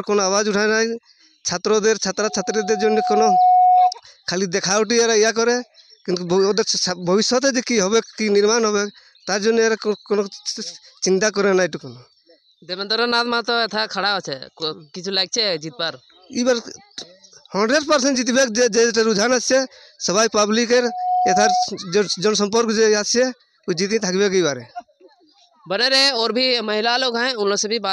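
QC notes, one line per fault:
2.19–3.95 s, loudspeaker feedback squeal: a steady 731 Hz tone swells over about a second and a half to roughly 5 dB above the sound. The gradual self-reinforcing build marks a loop gain over one, unlike a fixed-level hum or test tone.
20.73–21.69 s, loudspeaker feedback squeal: the same 731 Hz ring returns at the same frequency but builds much faster, in under half a second, to roughly 5 dB above the sound.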